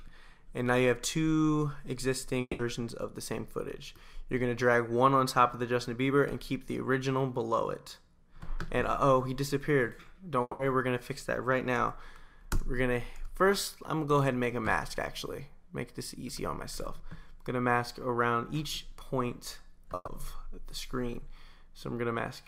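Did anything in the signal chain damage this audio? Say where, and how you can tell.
Yes. A long network dropout, likely in the network stage, hits 2.41–2.61 s and 10.41–10.61 s. About 180 ms of sound is replaced by a fading buzz or hiss, visible as smeared spectrogram bands dropping into a dark, silent gap.

A burst of packet loss at 19.95–20.09 s replaces 120 ms with a concealed, decaying buzz or hiss. The waveform shows a shrinking envelope before the sound resumes further on.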